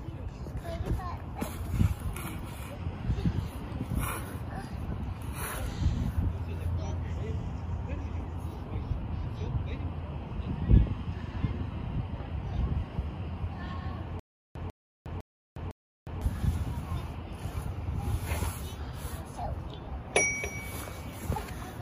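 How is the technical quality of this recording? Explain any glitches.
There's one real glitch to flag. From 14.2 to 16.2 s you get a stutter with silent gaps: a 147 ms burst repeats four times, each followed by about 360 ms of dead digital silence, so it pulses roughly every half second. That's likely a stalled stream replaying its last fragment on each retry, and the audio meant for that stretch is simply gone.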